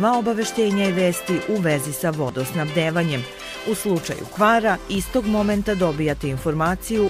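At 2.29 s the sound skips forward by roughly 20 ms, the two sides butted together with no gap. This is likely audio missing between chunks, lost at a handover fitting 2.5 s chunks; unlike a dropout, no silence marks the hole.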